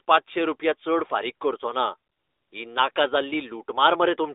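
At 2.12 to 2.52 s and again at 2.92 to 2.96 s, AMR comfort noise takes over. Speech frames stop, the receiver fills the gaps with steady synthetic noise, and the real background drops out abruptly.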